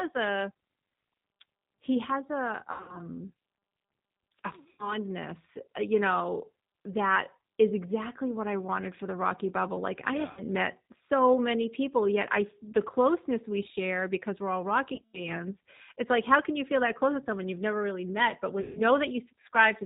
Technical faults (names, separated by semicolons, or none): G.729 codec; VoIP packet loss concealed by the speech codec